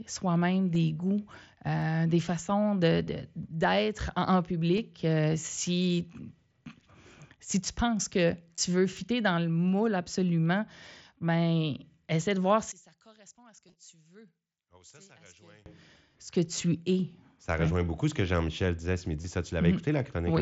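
Speech, carried over an mSBC Bluetooth headset link with light codec graininess, shows concealed Bluetooth headset packet loss at 0.75, 3.06, 4.78, 8.55–8.58, 13.68–13.75 and 19.22–19.24 s. Gaps of 7.5 to 22.5 ms are filled by repeating recent waveform; the single-frame losses are nearly hidden, while the longer runs give brief buzzy patches, and the 13.68 s cluster is scattered across about 75 ms. Single clicks at 1.82 and 8.97 s are most likely dropped samples, with only a few samples missing. Between 12.72 and 15.66 s the level falls by about 25 dB, likely from one channel inverted, so that the centred content cancels in mono.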